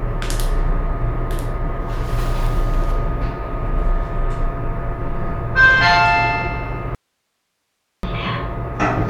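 At 6.95 s the sound cuts out abruptly. It is an audio dropout to a faint residue, with only low hiss left for about 1.08 s. The signal path likely stayed live.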